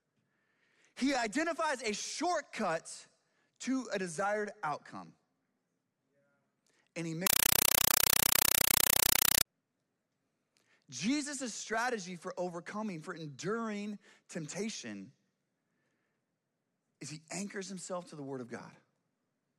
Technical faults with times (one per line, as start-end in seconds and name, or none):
7.27-9.45 compressed stream played as audio